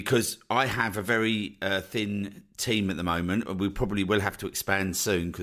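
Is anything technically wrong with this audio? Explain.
No, nothing is technically wrong with this audio.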